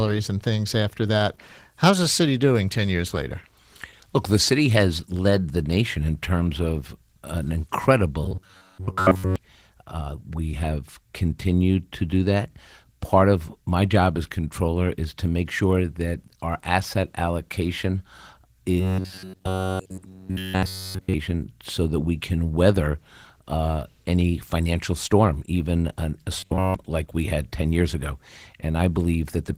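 The whole clip carries plainly audible Opus voice compression. The speech sounds a bit muffled and hoarse, with a slightly robotic edge, which fits a low bitrate of around 16 kbps using the hybrid mode, with SILK handling the lower band and CELT covering the top.

From 8.24 to 9.36 s there's robotic sound from repeated short buffers. Most of that stretch turns into a rigid metallic buzz at 93.8 Hz. The likely cause is audio arriving too slowly, so the player loops roughly 10.7 ms chunks to fill the gaps.

The same buzz takes over the whole span from 18.80 to 21.14 s, ending just before "so that we can". It hits once more from 26.39 to 26.75 s, between "storm even an a" and "like we had".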